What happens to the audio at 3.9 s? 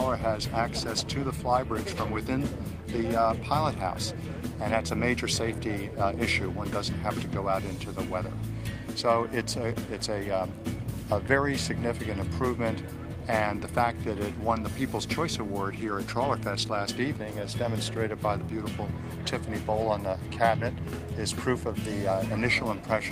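Nothing goes wrong at 3.9 s; the audio plays through that moment intact, with no dropout, glitch or other fault.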